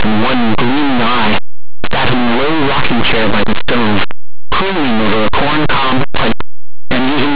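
From the first moment to the end, the speech is buried in very loud, harsh distortion. That's linear audio read as companded: plain 8-bit samples were decoded as mu-law codes, so values just on one side of zero blow up to the loudest outputs while those on the other stay small.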